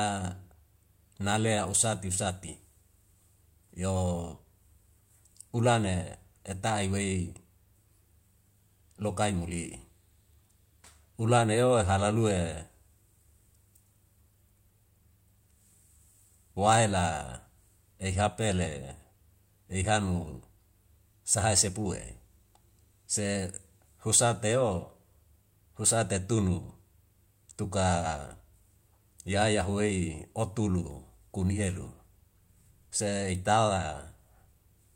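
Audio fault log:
No fault can be heard anywhere in this speech recording. Nothing in it needs a timed entry.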